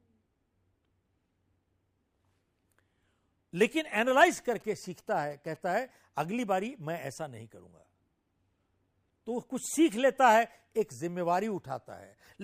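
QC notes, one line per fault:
4.14–5.57 s: GSM signalling bursts. A nearby 2G phone sends short groups of radio bursts that the audio circuit rectifies, so galloping ticks and brief 217 Hz buzzes sit roughly 30 dB under the speech. A spectrogram shows clustered vertical stripes with harmonics stacked every 217 Hz.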